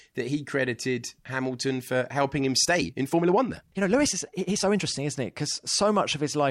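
From 2.60 to 4.86 s there's a time-stretched section: the speech suddenly runs about 1.45 times faster with pitch unchanged, so it comes across rushed. It's likely software squeezed that stretch to fit a length by dropping short slices.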